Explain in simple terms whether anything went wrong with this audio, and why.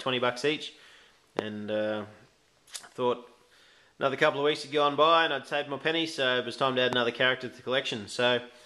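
A sudden voltage jolt, likely from a plug or switch, hit the signal twice, causing a loud pop at 1.39–1.41 s and again at 6.93–6.95 s.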